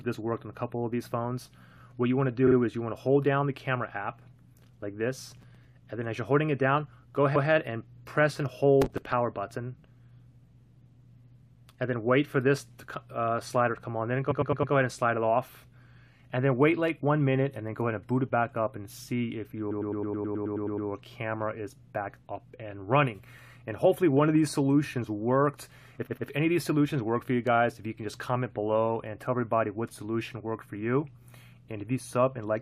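Repeated frames at 2.46 to 2.55 s, where a 42.7 ms block was written twice more, give a quick double stutter. Processor overload crackle at 5.31 to 5.65 s follows, as the processor missed a handful of tiny buffers of a few milliseconds each and filled them with stale audio, leaving a short gritty tear. At 7.35 to 7.48 s, a 128 ms block plays once more, adding a single repeat. Overload crackle returns at 8.82 to 9.13 s with around twenty missed buffers, a denser crackle. Repeated 106.7 ms blocks then stutter at 14.30 to 14.73 s (four extra plays), at 19.70 to 20.87 s (eleven extra plays, a long machine-gun loop adding 1.17 s), and at 26.06 to 26.27 s (two extra plays).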